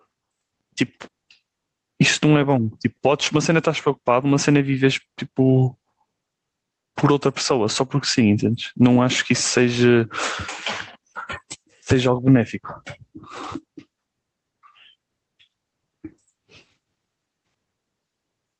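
Gain pumping runs throughout: the gain ducks by around 10 dB under loud speech, likely from excessive input gain driving a fast limiter.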